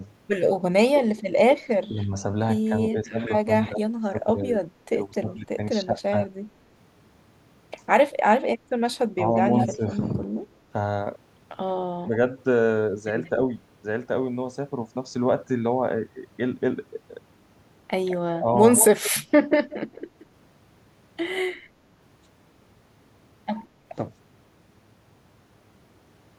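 At 0.00 to 0.04 s the speech dips by about 5 dB, and from 1.89 to 6.14 s it repeatedly sinks and breaks up, dropping by up to about 15 dB for roughly one and a half seconds in total. This is speech suppressed in double talk, likely caused by an echo canceller that, with both sides talking at once, could not tell this talker from the loudspeaker echo and turned everything down. The same ducking returns more briefly from 9.15 to 10.18 s, at about 10 dB, and inside it, from 9.58 to 9.76 s, a delayed copy of the speech appears 174 ms behind the original and only about 5 dB quieter. That copy is echo leak: the far end's echo canceller likely failed to remove what its microphone picked up from its loudspeaker, so it came back down the line. From 12.04 to 13.38 s, short dips of about 10 dB coincide with a faint echo tail from 12.39 to 13.30 s, about 30 dB down. From 18.06 to 21.42 s, the 174 ms echo persists at about 10 dB below the speech, with a short dip from 18.40 to 18.47 s.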